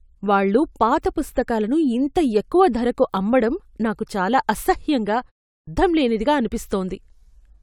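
At 5.53 s, after a 0.3 s pause, the speech resumes with a clipped start after a pause: the output device had dropped into an idle state and needed about 144 ms, to 5.67 s, to wake, so the opening sounds are lost and the speech begins abruptly.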